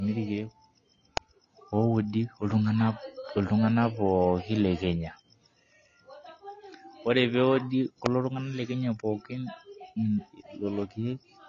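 A speech recording with two kinds of fault. The whole clip sounds dull and smeared. Nothing is heard above about 7.1 kHz, so the top of the spectrum is simply gone. Sibilants turn fizzy, and sustained sounds warble. The damage is plainly audible. This is likely AAC compression, AAC-LC at a low bitrate. The coder quantises its frequency lines coarsely, drops the upper bands and leaves gaps. The result fits a rate around 24 kbps. Two sharp snaps sit on top of the speech, at 1.17 s and 8.06 s. Each is very brief, a tight click lasting only a couple of milliseconds. They do not blend with the sound around them. They are likely electrical switching spikes: a nearby switch, motor or static discharge arcing, with the audio line picking up the burst.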